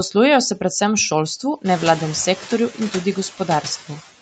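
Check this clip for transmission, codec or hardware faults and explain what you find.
Two noise-suppression faults are present in this speech clip; the room noise and the call path's 8 kHz bandwidth are not faults.

Noise suppressor artifacts run throughout: frame-by-frame band gating cuts steady background by about 13 dB, so residual noise dips between words and rises under them.

The noise suppressor is catching up from 1.65 to 2.01 s: room noise jumps around 1.5 s, and the lagging estimate allows only about 4 dB reduction before adapting over 360 ms.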